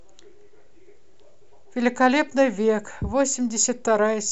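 A speech recording, and nothing is technically wrong with it.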